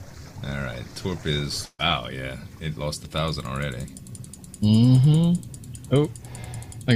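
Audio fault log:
1.65–1.81 s, burst of packet loss: a run of packets went missing or arrived too late to be played, so about 140 ms of audio never reached the output. The receiver covered roughly 133 ms of that gap by extending the last sound it had and turning it down as it went, ending in about 40 ms of silence. The result is a brief smeared, fading hold, after which the sound resumes with the missing stretch skipped.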